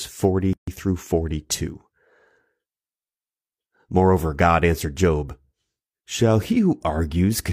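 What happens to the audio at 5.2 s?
Nothing goes wrong at 5.2 s: the speech runs on intact through that moment, with no dropout, click, distortion or other audible fault.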